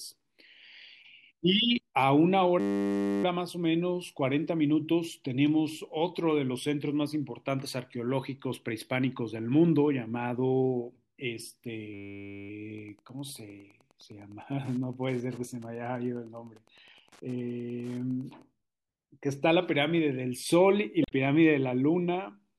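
At 2.6 to 3.24 s and again at 11.94 to 12.5 s, a system hang loop freezes the speech into a steady 100 Hz buzz: the hardware replays one 10 ms slice of buffer exactly, dozens of times. A dropout would be silent instead, and little or no speech seems to be skipped around either loop.

From 12.74 to 18.42 s, Wi-Fi interference adds a faint ticking, about 35 dB below the speech, every 102.4 ms. The circuit rectifies a nearby radio's beacons, and their fixed ten-per-second spacing distinguishes it from random electrical clicks.

At 21.02 to 21.12 s, damaged data in a compressed stream causes a brief glitch. The decoder misreads corrupted frames and searches for the next valid header.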